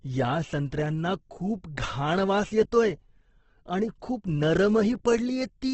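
Throughout, the speech sounds grainy and rough, with heavy noisy texture on voiced sounds and nothing above 8.1 kHz. This is likely Opus compression in its CELT music mode, where noise-filled bands replace lost detail, and the damage points to a bitrate around 12 kbps.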